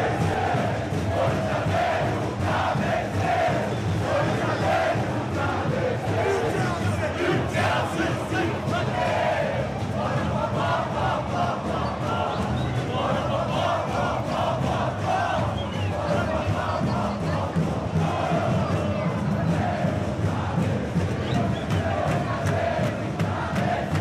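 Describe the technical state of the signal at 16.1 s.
At 16.1 s the signal is intact, with no dropout, click, distortion or other fault audible at that point.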